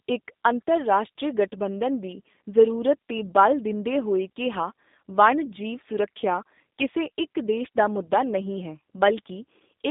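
From start to finish the speech sounds narrow, slightly rough and synthetic, with nothing above about 3.7 kHz or below about 200 Hz. That is G.729 codec damage, plainly audible here. The codec rebuilds each 10 ms frame from a vocal tract filter, a pitch estimate and a few pulses rather than the actual waveform, so fine detail is lost. Its rough texture fits the 8 kbit/s G.729A variant.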